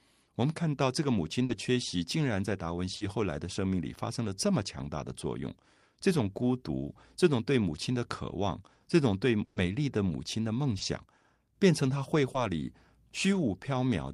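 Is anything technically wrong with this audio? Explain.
Yes, there are two kinds of packet-loss faults.

Short concealed packet loss occurs at 1.45–1.57 s, 2.96–3.02 s, 10.78–10.82 s and 12.32–12.36 s. The receiver synthesised the missing 40 or 20 ms from the preceding sound, adding a little extra time at 1.45 s. It is heard as a brief smear or wobble. On a spectrogram, harmonics smear briefly.

A burst of packet loss occurs at 9.44–9.58 s. About 120 ms went missing, and the receiver filled it with continued, fading sound with no silent gap. It is heard as a held buzz or hiss. The waveform shows a decaying, repetitive stretch.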